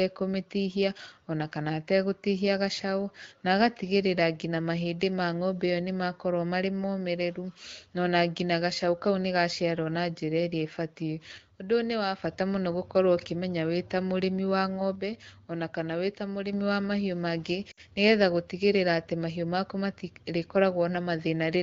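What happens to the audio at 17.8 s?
Lost AMR speech frames cause a short dropout from 17.71 to 17.81 s. About 60 ms of speech is missing, which fits three 20 ms frames. The wideband decoder repeats the last good pitch and vocal tract settings at falling gain. The speech smears briefly, fades quickly, then resumes.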